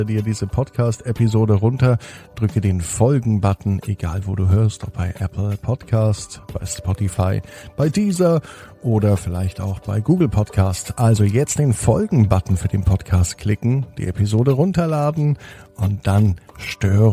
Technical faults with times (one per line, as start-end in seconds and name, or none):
none